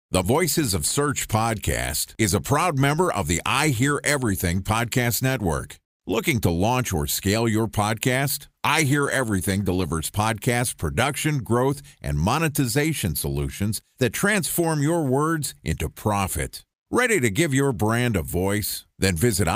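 Right after "or scale your podcast", at 8.51 s, there's a call bitrate drop lasting until about 10.01 s, with the words "podcast production growth and" following. The speech goes coarse and muffled with the top end dulled, consistent with the encoder falling from roughly 64 to 21 kbps for about 1.4 s.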